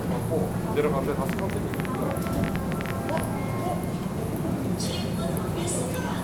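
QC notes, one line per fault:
1.29 to 3.21 s, train of clicks: an uneven ticking of about twenty sharp, similar pops at roughly 11.6 per second, peaking around 15 dB above the sound; likely interference from nearby equipment or a faulty connection or power supply injecting repeated pulses into the signal.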